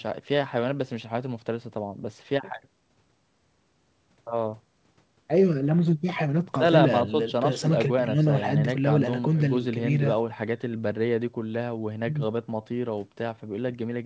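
No technical faults are audible in this speech.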